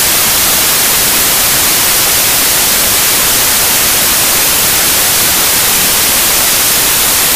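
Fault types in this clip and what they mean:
Samples built from the wrong bytes: The reader assembles each sample from its bytes incorrectly. It may be off by one byte, swap their order, or assume the wrong alignment. The rapidly changing low bits end up as the large part of every value. Here the fault runs through the whole clip. It sounds like loud, harsh broadband noise.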